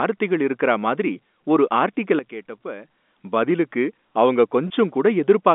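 At 2.19 s, right after "இருக்கறா மாதிரி ஒரு ஆர்டிகல", the level drops abruptly by about 12 dB. This is a sudden gain jump. The speech and the background noise fall together, in a single step with no fade. The likely cause is a gain setting applied from one sample to the next without a ramp. The quieter stretch lasts until 2.95 s, just before "பதிலுக்கு அவங்க". There the level steps back up just as sharply.

From 4.68 to 4.70 s, just after "பதிலுக்கு அவங்க", there is packet loss with pitch repetition. About 20 ms of audio is missing, which fits two small packets. The receiver fills the gap by repeating the last pitch period of the speech. The gap is short, so it never fades to silence. Instead the voice briefly sounds held and slightly buzzy, through the narrow telephone band of the line.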